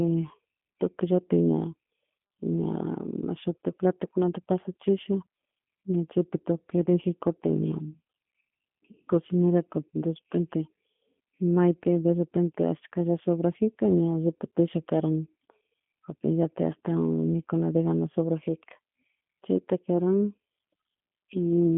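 From start to finish the speech carries G.729 codec damage: nothing above about 3.6 kHz, and a plainly rough, synthetic buzz from pulse-coded excitation. That buzz, not just the narrow band, separates it from plain telephone filtering, and fits an 8 kbit/s G.729A coder.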